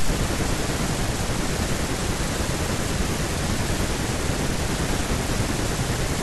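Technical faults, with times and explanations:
Nothing stood out on listening to this speech recording.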